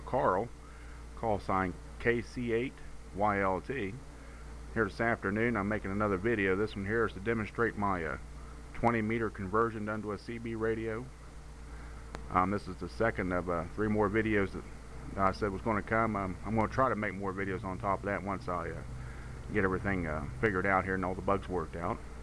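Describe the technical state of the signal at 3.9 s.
At 3.9 s the signal is intact, with no audible fault at that moment.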